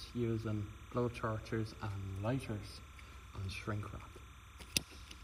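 Timecode bleed runs through the whole clip. A steady chirping warble sits behind the sound, about 20 dB down. It switches between pitches near 1 kHz and 2 kHz. Linear timecode at 29.97 frames per second has leaked in from a neighbouring track or cable.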